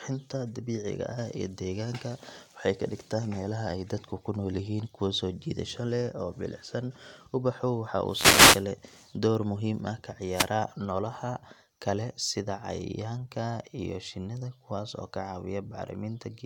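At about 8.08 s there's a wireless microphone noise hit lasting roughly 0.58 s, ending just before "door muhiim ah", and a shorter one from 10.31 to 10.51 s, right after that phrase and before "nolaha kale sida cayayaanka". Both come from the FM radio link fading as reflected signals cancel at the receiver. Its noise floor jumps up, heard as a quick swish of static.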